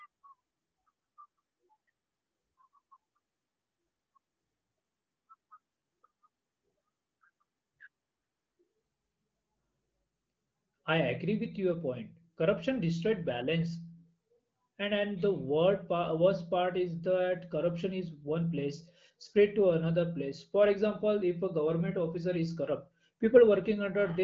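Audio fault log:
No faults detected.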